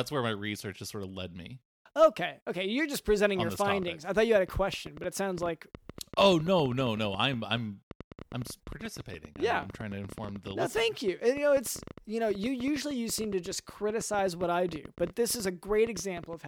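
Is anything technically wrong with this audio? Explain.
Yes. From 3.39 s to 16.34 s, a train of clicks, about 9 per second and irregularly spaced, pops a few dB above the speech, likely from nearby interference. It shows as thin vertical broadband stripes on a spectrogram and sharp waveform spikes, even in pauses.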